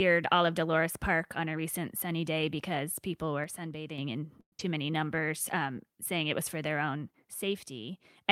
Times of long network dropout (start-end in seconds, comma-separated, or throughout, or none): 4.40-4.60